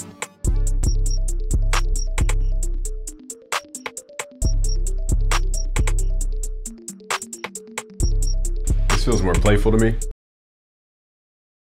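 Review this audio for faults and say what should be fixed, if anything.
Cut-off end at 10.11 s: the sound stops abruptly mid-event and drops straight to digital silence, with no natural decay or tail, and that silence runs for the final 1.5 s. The last buffers of audio were never written or played out, so the recording or playback chain stopped delivering samples before the source had finished. To prevent it, flush and drain all pending buffers before closing the stream or file.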